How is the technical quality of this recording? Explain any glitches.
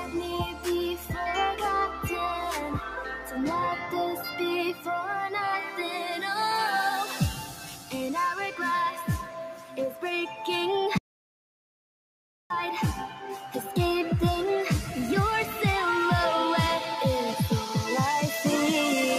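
The quality is poor, with three faults. A noise suppressor applied to music or sounds runs throughout. It treats sustained content as noise, so levels pump by around 10 dB.

The sound is cut by the noise suppressor at 0.0–0.67, 0.96–1.16, 1.88–2.08, 2.83–3.37, 4.16–4.40, 4.73–4.88, 7.39–7.94 and 9.23–10.03 s. Held parts sink by about 5 to 9 dB, while attacks pass.

An audio dropout to silence runs from 10.98 to 12.50 s. About 1.52 s goes to dead silence with no room tone. The likely cause is a lost input while recording continued.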